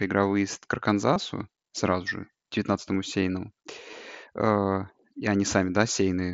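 A speech recording carries two brief instances of concealed Bluetooth headset packet loss, at 1.14 s and 3.91 s. Each gap lasts about 15 ms, which fits two lost headset frames, and the receiver filled it by repeating a matching stretch of the preceding waveform. Unlike a plain dropout, neither moment goes silent or clicks. Instead there is a slight warble as real audio resumes, all heard through the mSBC wideband headset codec.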